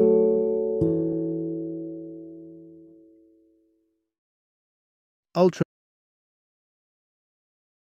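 At 5.63 s the sound cuts off abruptly and the rest of the clip is dead digital silence, with no room tone at all. This is an audio dropout to silence, likely from a lost input while the recorder kept writing zeros to the end.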